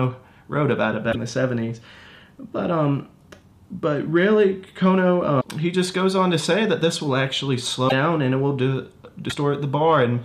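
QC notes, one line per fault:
1.11–1.15 s, 5.40–5.45 s, 7.88–7.92 s, 9.29–9.32 s: broken MP3 bit reservoir. At each point the sound skips forward and the next 30 to 60 ms come out garbled, roughly one or two MP3 frames of about 26.1 ms each. Frames were likely dropped from the stream, so the frame after each gap reaches back into the reservoir for its borrowed bits and decodes bytes that belong to a different frame.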